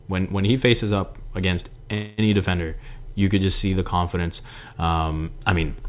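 Speech over a narrowband call path, with nothing above 4 kHz, which fits G.711 mu-law. There's a call audio freeze from 1.94 to 2.20 s, right after "he faces up against": about 240 ms of the last sound is stretched into a fading buzz or hiss, likely because packets stalled and the jitter buffer ran dry. It then resumes at "defender you could just" with nothing lost, just running about 240 ms later.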